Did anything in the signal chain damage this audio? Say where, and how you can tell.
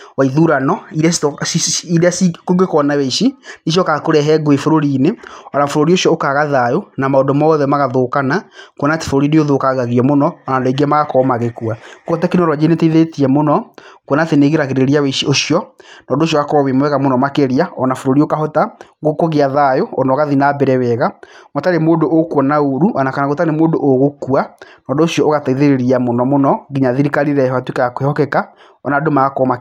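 No, nothing in the signal chain has left an audible mark on this speech recording. None of the stages, from the wiring and converter through to playback, shows any sign of damage.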